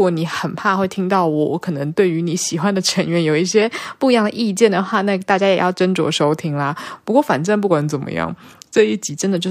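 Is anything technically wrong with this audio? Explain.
Yes. Two drift correction steps affect this speech. From 3.62 to 5.79 s it runs 5.71% fast and 96 cents sharp. From 7.71 to 9.14 s it runs 5.71% slow and 102 cents flat. Each time it snaps back afterwards. Clock-matching software likely jumped the playback rate to rebalance its buffer.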